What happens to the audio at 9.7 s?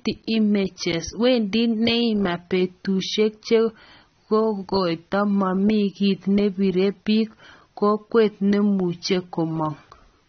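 At 9.7 s you're hearing the same AAC compression that runs the whole clip: nothing above 6.3 kHz, dull, smeared speech, likely from a low bitrate around 24 kbps.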